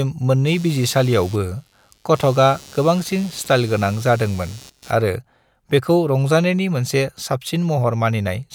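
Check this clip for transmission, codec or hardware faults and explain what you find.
One hardware fault is present. Computer activity noise, 0.47 to 4.92 s: load changes in the computer shift the shared ground, adding a buzzing chirp pulsing around 100 times a second, roughly 25 dB below the speech.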